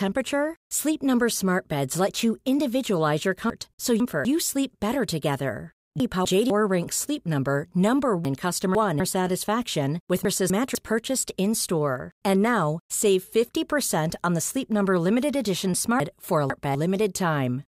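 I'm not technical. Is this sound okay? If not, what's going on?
No. The problem is chunks out of order, at 3.5–4.25 s (between "let you individualize your" and "sleep better together"), 6.0–6.5 s, 8.25–9.0 s (just before "satisfaction with"), 10.25–10.75 s and 16.0–16.75 s (after "limited edition"). Each time, a quarter-second piece of the speech arrived late and plays one or two pieces after where it belongs. Nothing is missing, but the order is scrambled, so you hear a brief jumbled stretch.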